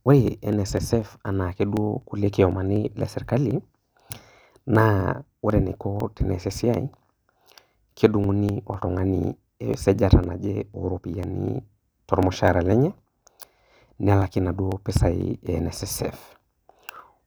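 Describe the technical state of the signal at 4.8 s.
At 4.8 s the speech is affected by periodic USB or driver dropouts, which run from 0.28 s to 16.96 s. Roughly every 0.25 s, a background task stalls the audio path and about a millisecond of signal is skipped. This produces evenly spaced ticks while sound is present.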